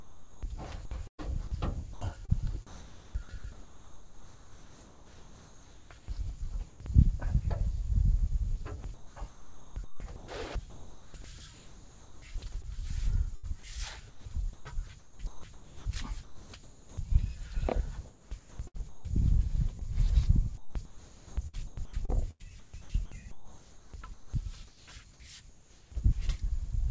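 From 0.0 to 6.8 s, 8.8 to 17.0 s and 18.1 to 25.9 s, the sound turns choppy. Quiet parts vanish into a flat synthetic hiss, roughly 4.0, 3.9 and 3.5 s in each stretch. This is likely sound chopped by the voice detector, switching to comfort noise.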